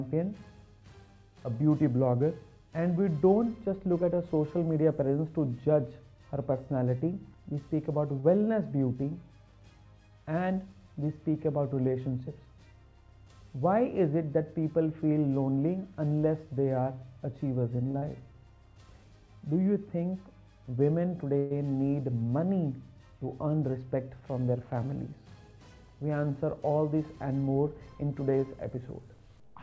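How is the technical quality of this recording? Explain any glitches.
The recording has several network-related glitches typical of an internet call. The audio has been through a call codec and has nothing above 8 kHz, so it sounds dull at the top.

Short stall from a late packet, at 8.20 to 8.40 s and 17.91 to 17.96 s. A packet arrived late and the jitter buffer ran dry. The receiver stretched the last sound for 38 ms, then 29 ms. Nothing is lost, but the sound hangs briefly with a faint buzz.

Short concealed packet loss, at 17.98 to 18.03 s, right after the second stall. About 40 ms never arrived in time. The receiver covered it with 33 ms extrapolated from the preceding sound, then blended back. It is heard as a quick smear or wobble.

Call audio freeze, at 21.38 to 21.52 s. The last sound is carried on as a fading buzz for 128 ms, with no silence. Then the audio resumes where it stopped. 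The likely cause is packets held up in transit, emptying the buffer.

Jitter buffer speed-up, at 12.07 to 12.47 s and 23.46 to 24.22 s. The buffer had built up excess delay. The receiver trimmed short pitch-period pieces to catch up, removing roughly 70 ms, then roughly 100 ms. Playback runs at 113% and 110% with unchanged pitch, so those stretches sound hurried.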